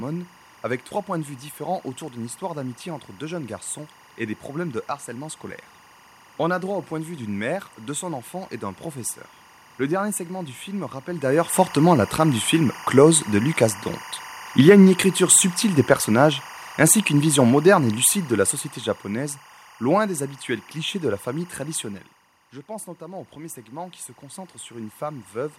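Speech recording with three system faults. Timecode bleed: linear timecode at 24 frames per second leaks in from a neighbouring line, leaving a steady chirping warble near 1 and 2 kHz, roughly 25 dB below the speech, throughout. Automatic gain falling: after "subtile des personnages ainsi", the gain control pulls about 9 dB off between 17.09 and 19.38 s, so voice and background sink together before "loin des habituels clichés". Automatic gain rising: when the talker moves away around 22 s and the input drops about 14 dB, the control adds about 8 dB from 22.66 to 25.37 s, and voice and room noise swell together.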